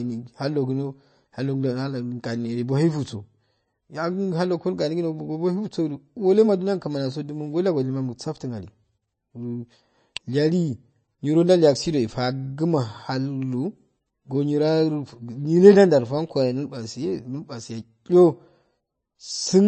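Throughout the speech the sound is watery and swirly, sibilants carry a metallic chirp, and nothing survives above 8.3 kHz. This is likely MP3 compression at a low rate, consistent with roughly 30 kbps, cutting the treble and switching weak frequency lines between frames.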